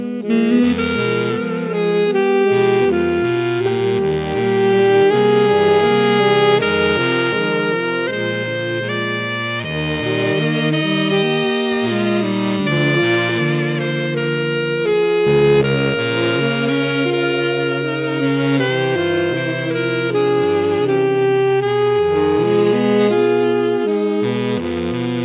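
No technical faults can be heard anywhere in the audio. There is nothing to flag at any moment of it.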